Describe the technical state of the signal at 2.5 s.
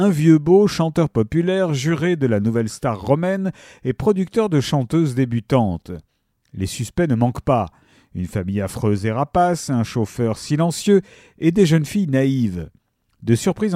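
At 2.5 s the signal is intact, with no dropout, distortion or other fault audible at that point.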